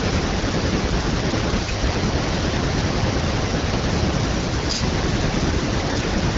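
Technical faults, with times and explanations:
1.80–1.96 s and 5.87–6.04 s, AMR bit errors: the sound turns hoarse, scratchy and gargly for a moment while keeping its rough pitch and level. That fits a burst of flipped low-priority bits across about eight frames, which misplaces the excitation pulses and skews the fine pitch, gain and spectral values. The second burst has a higher error rate, on the order of ten percent, against about seven percent for the first. The wideband coding around both bursts sounds clear.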